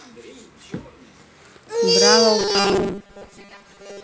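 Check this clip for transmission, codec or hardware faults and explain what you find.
There's one fault, and it runs from 2.39 s right to the end of the speech: robotic sound from repeated short buffers. The voice turns into a rigid, metallic buzz pinned at 200 Hz that only loosely tracks the speech. That pitch fits a 5 ms chunk being replayed over and over, most likely because fresh audio arrived too rarely, so the software looped the last few milliseconds and skipped most of the real signal. The G.722 wideband coding underneath is at 48 kbit/s, which leaves its lower band slightly noisier.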